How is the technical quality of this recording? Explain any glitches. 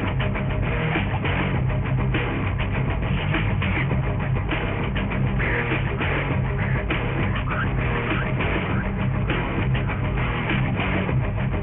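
The technical quality is poor because of one fault that runs through the whole recording. Aliasing: the sample rate was cut without an anti-alias filter, so content above 3 kHz folds back as gritty, unrelated tones, fairly strong, fitting a 6 kHz rate.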